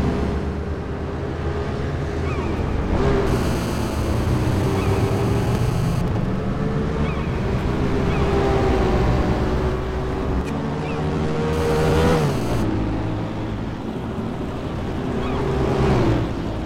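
A hard, raspy buzz at 217 Hz, rich in harmonics and about 16 dB below the sound, holds steady from 3.27 to 6.02 s and again from 11.53 to 12.63 s. This is GSM phone buzz: a nearby 2G phone on a call transmits in regular bursts, and the audio circuit rectifies those radio pulses.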